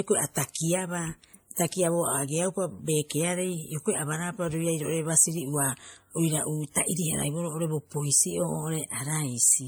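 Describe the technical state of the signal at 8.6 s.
At 8.6 s the speech carries the same layered codec artefacts heard through the whole clip, likely from transcoding between lossy codecs: the layered artefacts fit a 48 kbit/s MP3 pass, re-encoded by WMA 1 at 96 kbit/s, which spent bits preserving those artefacts while adding its own. Content stops above 20.1 kHz.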